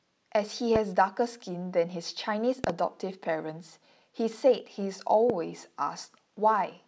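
Loud pops at 0.76–0.78 s, a double at 2.64–2.72 s, and 5.30–5.32 s: a sudden voltage spike, likely static or a switching transient, jumps about 15 dB above the speech, which continues underneath.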